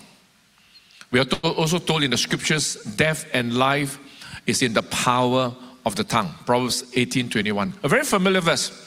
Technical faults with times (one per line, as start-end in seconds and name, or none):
1.33-1.45 short stall from a late packet
6.97-8.44 jitter buffer speed-up